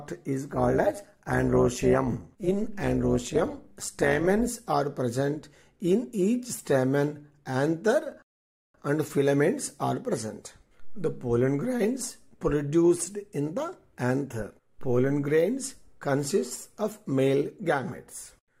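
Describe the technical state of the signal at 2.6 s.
A metallic buzz with extra tones around each note runs from 0.53 to 4.49 s, the level pulsing by about 11 dB around 200 times a second: overlap-add ripple, from frames rejoined with uneven overlap gain.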